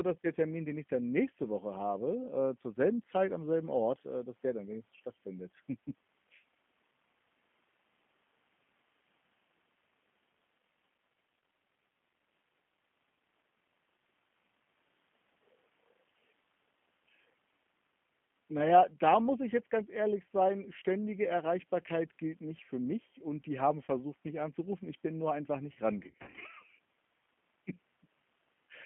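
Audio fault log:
throughout: G.729 codec. The speech sounds narrow, slightly rough and synthetic, with nothing above about 3.4 kHz or below about 150 Hz. The damage is plainly audible. At 8 kbit/s the voice is not carried as a waveform. It is rebuilt from a vocal tract filter, a pitch predictor and a few pulses per frame, so fine detail and breathiness are replaced by a coarse approximation.
23.85–23.90 s: VoIP packet loss concealed by the speech codec. Just after "mich und die haben", the voice briefly smears into a stretched, fading hold before "mich anzurufen". About 30 ms of audio went missing, which fits roughly three lost 10 ms frames. The decoder filled the gap by repeating its last pitch and filter at falling gain. Because each frame builds on the previous one, the sound stays weak or distorted as speech resumes.
25.99–26.43 s: VoIP packet loss concealed by the speech codec. Right after "bin nur einfach nicht", the voice repeatedly stretches and fades for nearly half a second. 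About 240 ms of audio was lost in short gaps scattered over 420 ms, none longer than 40 ms. The decoder kept extrapolating from its last pitch and filter, so the voice stays weak or distorted as speech resumes after each gap.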